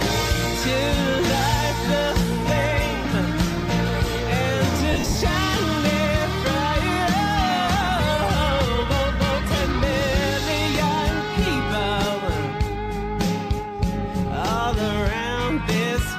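Between 4.93 and 5.15 s the audio breaks up from lost LE Audio frames. About 150 ms of sound is missing in short gaps scattered across those 220 ms, the longest running to around 40 ms, which fits 10 ms LC3 frames dropping over the Bluetooth link. The decoder fills each gap by replaying the last good spectrum with randomised signs, so any tonal content smears into brief noisy patches instead of cutting out cleanly.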